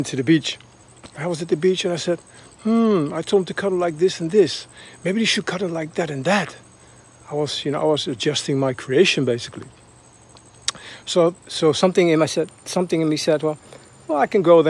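From 11.81 s to 14.42 s, the audio plays back at the wrong sample rate. The samples run faster than they were captured, with no conversion between rates. Speed and pitch rise together. The passage moves about 1.09 times too fast and sits about 1.5 semitones sharp. That ratio fits material recorded at 22 kHz but played at 24 kHz. The result sounds slightly hurried and raised in pitch throughout that stretch.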